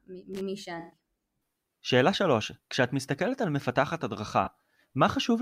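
At 0.33 to 0.41 s there is loose connector crackle: a worn or dirty contact intermittently breaks the signal path, producing an irregular burst of scratchy crackle.

From 0.79 to 0.97 s, and again at 4.44 to 4.48 s, there is AAC frame loss with concealment. The decoder replaced about 128 ms of missing data, which points to six lost frames, and then a single frame of about 21 ms. It filled the gaps by reusing the last good spectrum, leaving a smeared, noisy or phasey patch.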